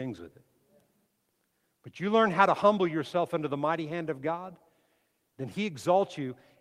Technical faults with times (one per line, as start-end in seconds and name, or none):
none